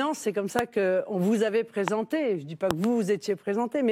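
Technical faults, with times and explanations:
0.59–0.61 s, 1.88–1.90 s and 2.71–2.86 s, loud pop: three sharp hits jump out at about 20 dB over the speech, the first just after "c'est comme", the second right after "qu'on vous avait", and the last a quick double pop. Each is likely a voltage spike from a plug, switch, static or driver glitch landing on the signal, shaped into a brief thump while the speech carries on underneath.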